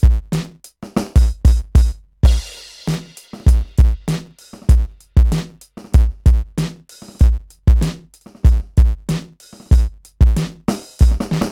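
From start to finish, the music carries a block size mismatch, truncated type. One stage hands over longer blocks than the next accepts, so each block's tail is dropped. Those regular cuts make a buzz at 109 Hz. The music also runs 1.09 times fast, at roughly normal pitch.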